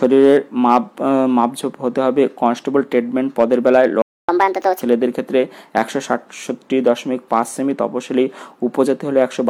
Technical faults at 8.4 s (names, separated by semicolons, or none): none